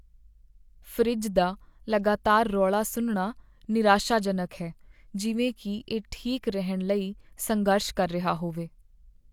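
No audible technical faults in the speech recording; nothing to flag.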